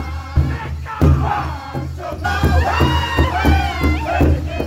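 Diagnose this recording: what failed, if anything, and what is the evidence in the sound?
At 0.36 s, 2.24 s and 3.23 s the sound jumps forward. The first and last jumps lose about a tenth of a second and the middle one about 0.4 s. These are compressed frames skipped at the codec or storage stage. Whole frames, around four and around fifteen of them, which fits a 26.1 ms frame, are missing or rejected by the decoder as damaged.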